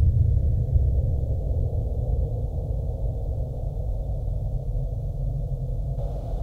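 Nothing in the clip points to a technical problem; the sounds come through steady and intact, with no glitches, gaps or odd noises anywhere along the way.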